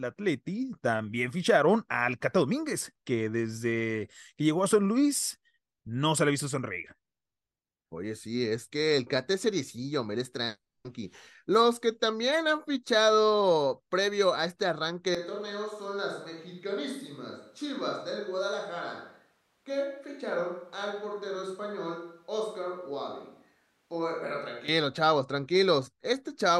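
Right after "previo a este arranque", from 15.15 to 24.68 s, speech turns abruptly roomy, thin and about 10 dB quieter, unlike a plain gain drop. This is likely a switch to a distant microphone.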